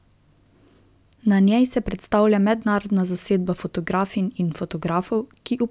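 No technical faults can be heard anywhere in this speech clip.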